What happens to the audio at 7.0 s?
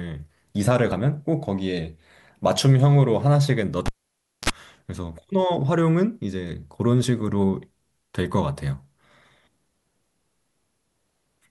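At 7.03 s compressed frames are skipped: about one 26.1 ms frame never plays, so the speech jumps ahead by roughly 30 ms. At the join the skip is heard as a brief smeared blip if the codec is lossy, or a hard click if it is lossless.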